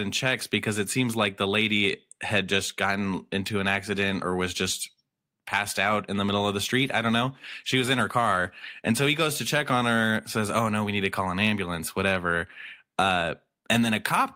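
No technical faults can be heard anywhere in the recording.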